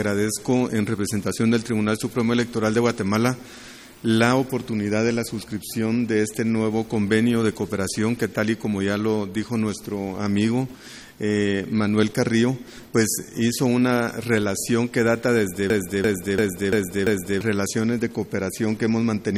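A system hang loop runs from 15.70 to 17.41 s: one 341 ms slice of sound repeats five times at about 2.9 Hz, a machine-gun stutter from the audio hardware cycling a frozen ring buffer, which fits a 16384-sample buffer. Roughly one and a half seconds of audio are lost.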